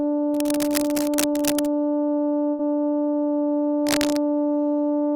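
From 0.34 to 1.69 s, cable scratch noise rustles unevenly over the music at roughly 10 dB below it, likely from a worn cable or connector being moved. Unlike a dropout, the music keeps playing underneath.

At 2.51 s, a burst of packet loss cuts the music off. About 75 ms is filled by a fading continuation of the last sound, and the music then resumes at 2.61 s with about 80 ms missing, a jump rather than added noise.

From 3.86 to 4.19 s, the cable scratch noise returns louder, about 5 dB below the music, likely from the same kind of contact fault, again scratching over sound that continues.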